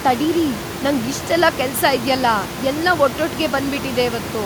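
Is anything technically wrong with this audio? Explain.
No, nothing here points to a technical problem; the only thing to notice is the room's own background noise, sitting about 12 dB below the speech, and that's simply part of where the recording was made.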